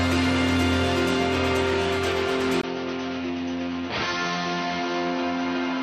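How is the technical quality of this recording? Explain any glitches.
The recording has one clear fault. At 2.61 s the sound changes character and stays that way to the end. A gap of about 20 ms marks the change. After it, nothing reaches above 6.2 kHz, so the top end turns dull and boxy. The level drops by roughly 5 dB. A faint new noise floor appears, well below the signal. This is likely an input switched to a poorer device, with its own narrower band, tone and noise.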